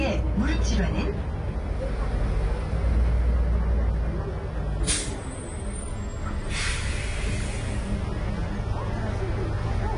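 A recording of sounds, about 10 seconds long, with AAC compression damage audible from start to finish. The top end is dull and limited, transients sound smeared, and sustained or noisy parts take on a warbling, fizzy texture. That points to AAC-LC at a low bitrate, likely around 32 kbps, where the encoder lowers its cut-off and leaves gaps or substitute noise in bands it cannot afford to code.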